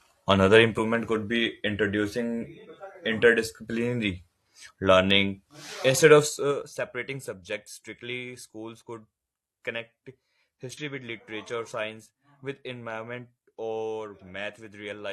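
Right at the start, around 0.75 to 0.80 s, there's a short glitch just before "could be introducing interdisciplinary". That's damaged data in a compressed stream: a stretch of the encoded bytes is corrupt, so the decoder can't make sense of those frames, loses its place and has to hunt for the next valid frame header before normal sound resumes. The same thing happens again at 10.77 to 10.81 s, a quick blip right before "with literature science with".

Between those, from 6.23 to 6.74 s, just ahead of "subjects strictly schools could", the level drops by about 15 dB, and you can hear zipper noise riding on it. The gain isn't ramped smoothly. It's stepped down in 3 dB jumps, roughly ten a second. Each jump is an abrupt discontinuity in the waveform, so instead of a clean fade you get a fast little ticking or zipping sound over the half-second the level is moving.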